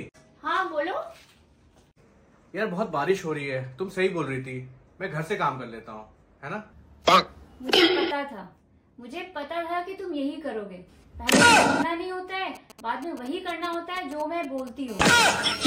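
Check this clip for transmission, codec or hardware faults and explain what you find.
Two kinds of radio-frequency interference from a nearby 2G phone appear near the end, one after the other.

From 12.55 to 14.69 s come GSM signalling bursts: the phone transmits only short groups of pulses, and the audio circuit rectifies them into a galloping dit-dit-dit of brief 217 Hz buzzes, roughly 20 dB below the signal. A spectrogram shows separate clusters of vertical striations.

From 14.88 to 15.62 s a steady GSM phone buzz follows, with the phone now transmitting in bursts 217 times a second as in a call. Its 217 Hz pulses, rectified, give a hard, raspy buzz about 20 dB below the signal. A spectrogram shows an unbroken comb of harmonics, and the waveform shows an evenly spaced spiky pattern.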